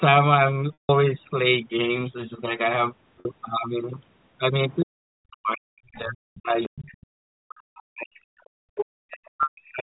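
At 0.73 s there's packet loss with pitch repetition: the receiver holds the last pitch period for a moment, then fades it out, so you hear a brief buzzy hang. About 160 ms went missing, and it trails off into a short gap before the speech returns. A shorter 50 ms loss at 3.2 s just sounds like a slightly held note.

Around 4.7 s you catch a faint scrap of the other side's voice leaking through, likely loudspeaker echo the canceller didn't fully remove. More fragments come at 6.63, 7.78, 8.14 and 8.44 s, the one at 6.63 s noticeably louder than the rest.

From 4.83 to 8.12 s, and again from 8.63 s to the end, the speech gets suppressed in double talk. The level dips hard, sometimes dropping out almost entirely, likely as the canceller clamps down while both sides overlap.

Then at 9.43 s another packet loss with pitch repetition bridges about 110 ms with that same buzzy hold and fade, which fits 10 ms packets.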